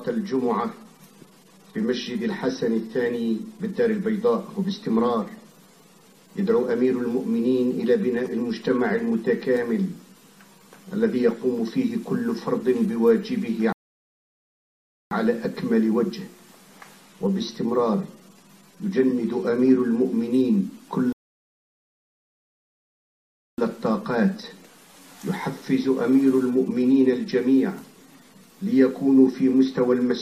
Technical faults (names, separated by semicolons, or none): rebuffering stall